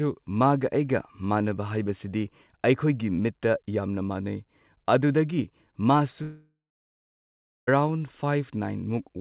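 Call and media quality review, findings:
Clock slip clicks, 0.20 s to end of clip (about 9.2 s). Faint regular ticks roughly every 0.15 s, steady throughout, most audible under sustained speech. Likely cause: two unsynchronised device clocks drifting apart by around 150 ppm, with one sample dropped or repeated at each slip. Component: capture/playout clock boundary. Audible through the 4 kHz-limited call band, which fits G.711 A-law at 64 kbps.

Long network dropout, 6.22 s to 7.69 s. Roughly 1.46 s of audio never delivered. The receiver extends the last sound as a fading buzz or hiss, then about 1.1 s of silence before speech resumes mid-stream with the gap content missing. Likely cause: packet loss or a stalled network path upstream of the jitter buffer, with concealment running out. Component: transport/jitter buffer.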